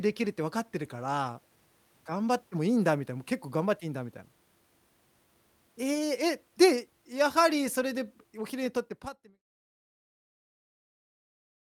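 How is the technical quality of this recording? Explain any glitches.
No audible glitches or faults.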